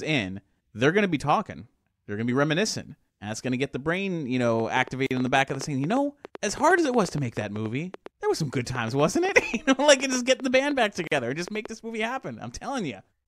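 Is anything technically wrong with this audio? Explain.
Yes. From 4.47 to 11.67 s, about fifty irregular pops, roughly eight per second and a little louder than the speech, tick over the sound. This train of clicks likely comes from nearby equipment interference or a faulty connection or power supply.

At 5.07 s and 11.07 s, the speech drops into about 42 ms of sudden silence, then resumes where it stopped. Each is a gap at a join of encoded pieces, where encoder delay and end padding were left in.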